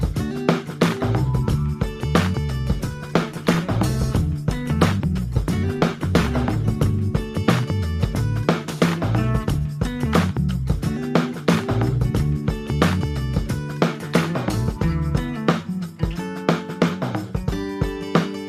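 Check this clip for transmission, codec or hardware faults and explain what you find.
One transmission fault stands out: a call bitrate drop from 2.77 s to 7.33 s. The encoder's budget collapsed, and the sound, consistent with a fall from 128 kbps to roughly 22 kbps, turns coarse, watery and dull. On a spectrogram the upper frequencies abruptly vanish across that span, leaving a hard low-pass ceiling and smeared, blocky detail, before full bandwidth returns.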